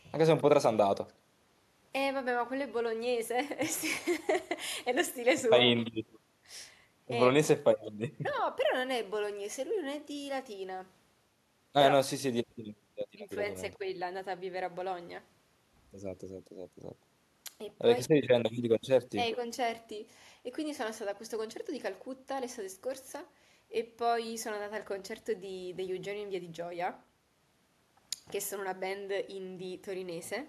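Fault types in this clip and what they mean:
No technical faults can be heard anywhere in the recording; the signal stays continuous throughout.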